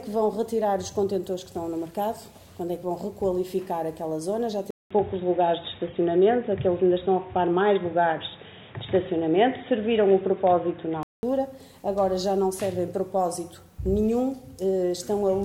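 Input switched to a poorer device, from 4.71 s to 11.23 s. The sound drops out for about 200 ms at the switch, then returns dull and boxy, with nothing above 3.8 kHz, a level shift of roughly 5 dB and a new background noise sitting around 35 dB below the signal. The likely cause is the system moving its input to a narrower-band microphone or a headset's call profile, before the original device returns at 11.23 s.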